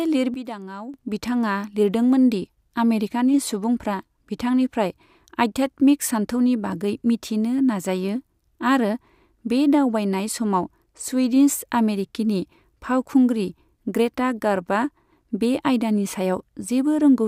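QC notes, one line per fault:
0.34–0.94 s, sudden gain jump: the level drops by about 12 dB from one sample to the next, holds there, then steps back up at 0.94 s, with the speech and the background noise falling and recovering together. The likely cause is a gain setting or bit shift applied without a ramp. Unlike a fade or compressor pumping, there is no gradual slope and the noise floor moves with the signal, which gives two clean level steps.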